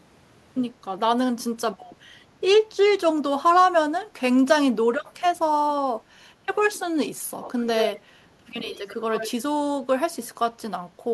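Echo leak at 7.41–8.0, 8.64–8.96 and 9.14–9.31 s: the speech repeats 75 ms late, strong first, then fainter, likely escaping an imperfect loudspeaker echo canceller.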